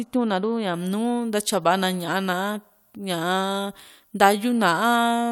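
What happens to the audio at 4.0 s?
At 4.0 s the speech is still inside a stretch of pre-emphasis left on, running from 0.74 s to the end. The treble lift matching an FM 75 µs curve was never undone, so 10 kHz sits about 13 dB above 1 kHz, making the sound thin, bright and sibilant.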